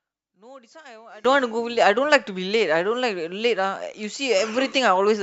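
From the start to 1.25 s the speech collapses to a faint trace about 24 dB quieter, with the centred voice almost gone. The likely cause is one channel inverted: with one stereo side's polarity reversed, the shared centre cancels in a mono sum, leaving only the small difference between channels. Unlike a simple level drop or dropout, the residue is a faint copy made of the mismatch between channels rather than silence.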